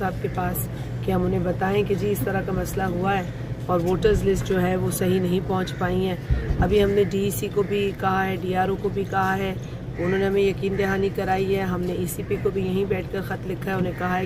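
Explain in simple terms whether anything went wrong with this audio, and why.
Nothing went wrong here: no dropouts, glitches or distortion are audible anywhere in the recording.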